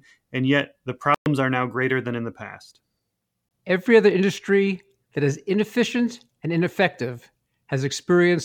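Speech that cuts to silence at 1.14–1.26 s and briefly at 3.49–3.51 s, resuming further along; likely Bluetooth dropout, packets missing the headphones' playback deadline.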